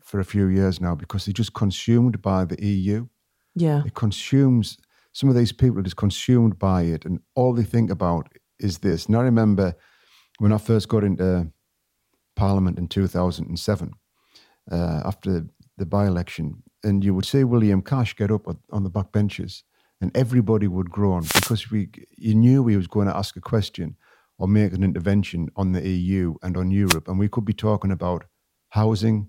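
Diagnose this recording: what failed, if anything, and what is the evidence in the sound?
Wireless microphone noise hits in the analogue radio link: static swishes at 21.20–21.55 s after "benches and everybody would" and 26.86–26.98 s after "and on", as reflection fades raise receiver noise.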